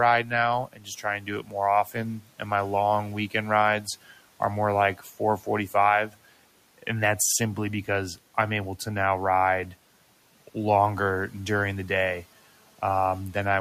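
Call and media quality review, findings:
Speech cut by the noise suppressor at 0.67–1.04 s, 1.2–1.54 s and 2.18–2.41 s (just before "my long weekend"). Parts of each span swallowed, down about 12–13 dB. The suppressor misreads soft speech as noise. This is a level dip, not a dropout or gap, and the room noise, about 26 dB under the speech, dips along with it.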